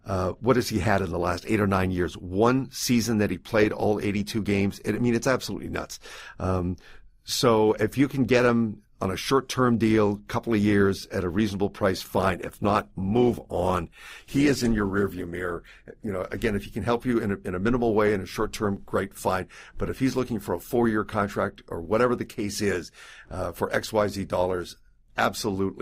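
Right after "at a reasonable price", from 12.15 to 16.15 s, the adaptive stream drops to a lower bitrate. Codec artefacts rise without a gap, which fits a step from around 64 to 16 kbit/s Opus. The quality stays abruptly lower until "again if he can".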